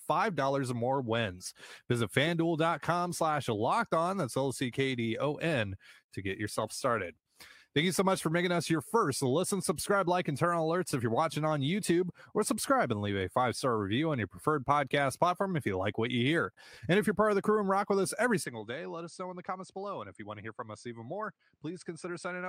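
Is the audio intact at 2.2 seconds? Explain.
Yes, the speech at 2.2 seconds plays through intact, with no audible dropout, click, distortion or other fault at that moment.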